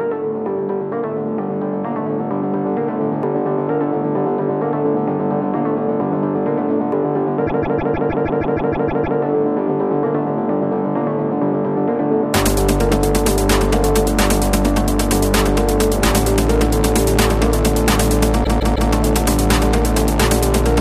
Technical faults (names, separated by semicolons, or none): repeated frames